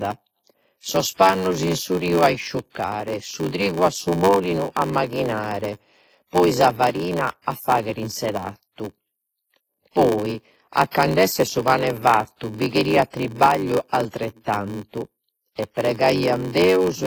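WMA compression runs throughout: heavy transform-coding damage, with ringing, washy smearing, and signal-following hiss, likely from a low-bitrate WMA 1 encode around 24 kbps.

Block size mismatch (padded) also runs throughout: zero-filled gaps in every block give a 93.8 Hz buzz and slow the speech to 0.861 times its normal speed at about normal pitch, which fits a 512-sample read block.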